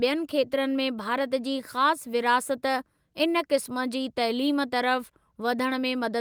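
Nothing technical stands out in this short speech recording; there's no fault here to point to.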